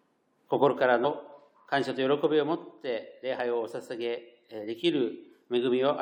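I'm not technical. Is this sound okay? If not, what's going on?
No. Twice, the compressed file loses short chunks, a fault called compressed frames skipped: the decoder never plays them. At 1.03 s and 3.38 s the sound jumps ahead by roughly 50 ms, about two 23 ms frames.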